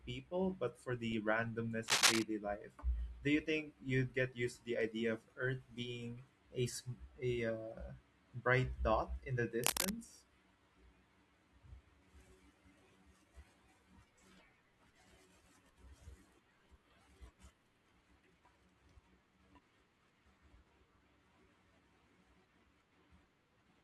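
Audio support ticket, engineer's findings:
Cable scratch noise, 1.88–2.23 s after "but for the randomness" and 9.64–9.91 s after "dot in the": dense rustling bursts above the speech, likely a flexed worn cable or connector with fluctuating contact resistance.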